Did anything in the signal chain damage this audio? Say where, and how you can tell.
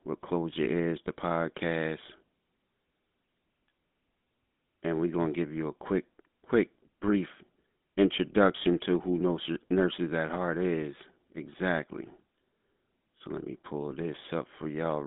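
Yes. The damage sits at the codec stage and runs through the whole clip: this is GSM full-rate coding. Nothing reaches above about 3.8 kHz, and the band sits roughly between 200 Hz and 3.6 kHz, like a narrowband phone line. The plainly audible buzzy, gravelly roughness comes from modelling the vocal tract and driving it with sparse, regularly spaced excitation pulses. That behaviour fits the 13 kbit/s GSM full-rate coder.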